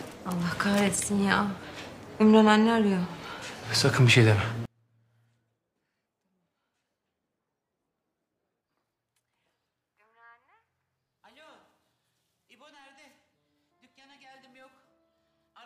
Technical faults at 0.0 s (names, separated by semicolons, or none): none